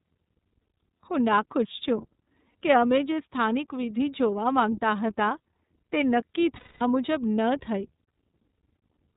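The whole clip runs through the iLBC codec. Everything above 4 kHz is gone, and the speech has that plainly audible rough, slightly synthetic edge. The character fits iLBC's 30 ms frame mode at around 13.33 kbps, where each frame's excitation is coded independently.

Then there are lost iLBC frames. At 2.51 s a 30 ms gap, consistent with one dropped frame, gets patched with a brief buzzy repeat of the last pitch cycle. At 6.56 s a much longer 240 ms loss, roughly eight frames, turns into a held, breathy vowel that fades, and the voice snaps back cleanly on "મુજબ ન થઈ".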